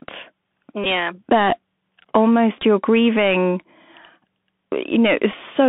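Speech squeezed through a Bluetooth CVSD headset codec the whole way: the band sits at roughly 200 Hz to 3.5 kHz, s sounds turn scratchy, and there's a grainy hiss underneath. On top of that, a Bluetooth headset packet repeated three times. At 0.84 to 0.86 s, about 15 ms replays, which fits four lost packets. At 2.57 to 2.63 s, just before "you're grieving", a scattered patch of short buzzy repeats near 267 Hz runs up to about 15 ms at a time. At 5.32 s there's a brief buzzy repeat of about 11 ms.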